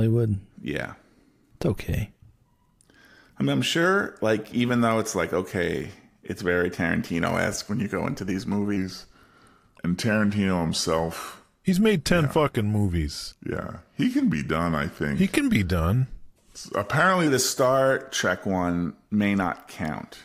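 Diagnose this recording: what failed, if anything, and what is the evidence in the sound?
A section at the wrong speed runs from 8.77 s to 17.27 s, after "you go into these". The speech slows to 0.893 times normal speed and drops about two semitones, with pitch and tempo shifting together. The likely cause is a playback or editing stage resampling that stretch against a mismatched clock.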